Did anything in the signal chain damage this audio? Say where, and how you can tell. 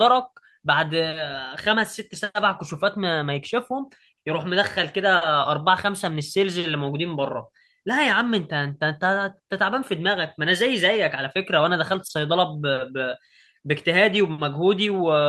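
Yes, at the network stage: two short stalls from a late packet, at 5.17–5.23 s and 12.07–12.21 s. The jitter buffer ran dry and the receiver held the last sound for 40 ms and 20 ms, then carried on. Unlike packet loss, nothing is skipped; the sound just drags briefly.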